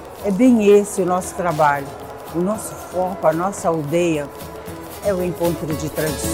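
A faint, steady ticking runs through the whole clip at close to ten clicks a second, sitting roughly 30 dB below the sound. This is Wi-Fi interference: a nearby radio's beacon, sent every 102.4 ms, is picked up and rectified by the audio circuit.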